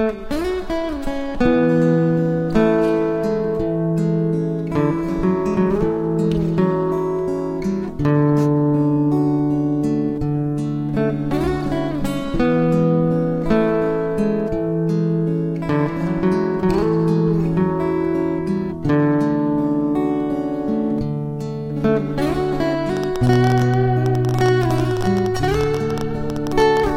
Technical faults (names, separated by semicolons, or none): train of clicks